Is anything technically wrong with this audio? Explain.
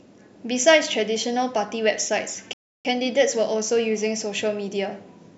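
Yes. At 2.53 s the speech halts in a rebuffering stall lasting until 2.85 s. The player exhausted its downloaded audio and paused until more data arrived, inserting about 0.32 s of silence. Playback then picks up at the exact point it left off. This separates it from a dropout or packet loss, where a stretch of the signal is missing and the sound jumps ahead. Here the gap adds time, so the clip runs longer by the length of the pause.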